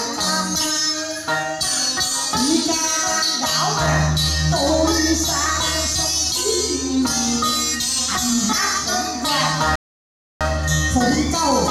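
At 9.76 s the audio cuts to silence for about 0.65 s, a playback stall, likely the player running dry or its thread getting blocked, before sound returns at 10.41 s.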